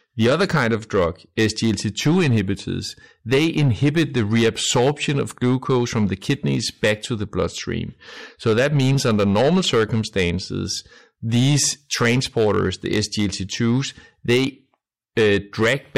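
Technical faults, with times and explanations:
Throughout: hard clipping. The speech is driven about 8 dB past what the signal path can pass, so roughly one sample in twenty is cut flat. Those flattened peaks add high harmonics. The peaks of the speech carry a crackle.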